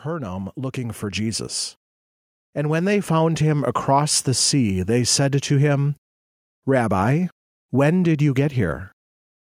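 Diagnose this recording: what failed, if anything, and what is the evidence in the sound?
The fault is automatic gain rising in the call-processing stage. From 0.05 to 1.6 s the level climbs by about 5 dB, and from 2.54 to 3.81 s it climbs again by about 3 dB, ending just before "the sea they said". In both ramps the background swells along with the speech, which points to a gain stage rather than the source. The AGC judged the input too quiet and raised its gain gradually over more than a second each time.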